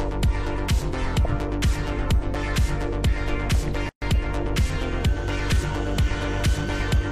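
At 3.89 s a silence of about 128 ms opens and lasts until 4.02 s: a gap at a join of encoded pieces, where separately encoded segments were butted together with their encoder delay and end padding left in. Unlike a dropout, nothing is lost, and the sound resumes exactly where it stopped.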